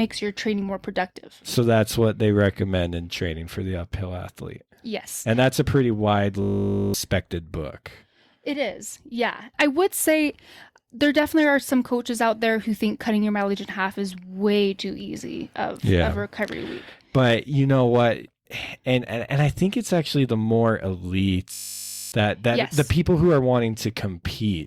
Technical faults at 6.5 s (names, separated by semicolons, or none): system hang loop